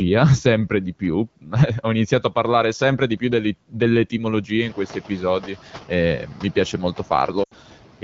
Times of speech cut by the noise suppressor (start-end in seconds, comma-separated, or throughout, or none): 0.70-2.34, 2.80-3.22, 3.54-6.99